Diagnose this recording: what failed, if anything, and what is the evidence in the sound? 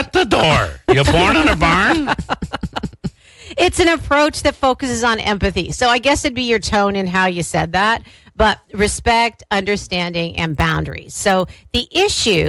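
From 10.45 s to the end, a steady 20 Hz ticking rides on the sound, present only while signal plays. That's a resampler restarted on every block: converting 24 kHz to 48 kHz in isolated 50 ms blocks leaves an error at each block edge.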